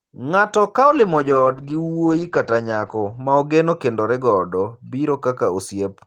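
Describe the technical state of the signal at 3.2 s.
A call bitrate drop, 0.89 to 3.85 s: coarser coding, fitting a fall to roughly 12 kbps, sounds watery and rough, with highs cut at 8 kHz, unlike clean filtering.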